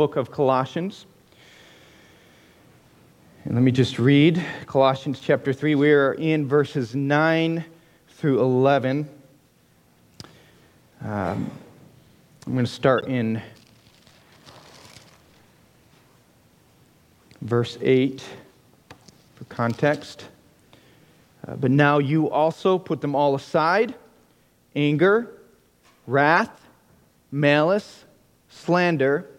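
A short squeaky burst of misplaced noise cuts in from 12.98 to 13.05 s, peaking around -20 dBFS, followed by a sharper, louder blip at 26.38 s, around -15 dBFS. Both are a corrupt frame decoded: bit errors in the compressed stream scrambled gains and spectral codes, yet the decoder played the damaged frames anyway, scattering energy into wrong frequencies. The first spans a few frames, the second a couple.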